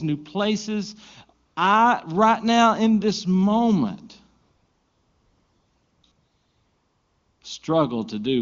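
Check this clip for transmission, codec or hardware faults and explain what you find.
The clip has AMR comfort noise at 1.45 to 1.55 s, 4.41 to 6.03 s and 6.11 to 7.41 s. The AMR wideband coding, which sounds like its highest mode, leaves only faint damage.

AMR comfort noise: the phone judged the talker silent and stopped sending speech frames. The receiver substituted smooth synthetic hiss, which switches in and out. Unlike a dropout, these gaps are filled with noise rather than silence.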